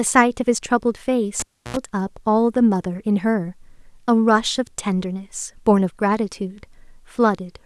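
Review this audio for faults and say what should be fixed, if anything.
Cable pulled and plugged in, 1.40 to 1.77 s: a pop, then 0.32 s of near silence, then 83 ms of 60 Hz mains buzz while only the plug tip touches, and a second pop as sound returns. Mute the channel before handling connectors.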